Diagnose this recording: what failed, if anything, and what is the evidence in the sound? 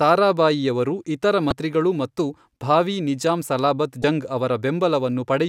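The failure is at the codec stage: damaged data in a compressed stream, heard twice in this speech. A brief glitch sits at 1.49 to 1.52 s, right after "ತಾರಾಬಾಯಿಯವರು ಇತರ", and another at 4.01 to 4.04 s, following "ಮತ್ತು ಭಾವೀ ನಿಜಾಂ ಸಲಾಬತ್". Corrupted bytes made the decoder misread frames and resynchronise on the next header. On a spectrogram each shows as a 30 ms smear of broadband or tonal garbage; the waveform shows a discontinuity there.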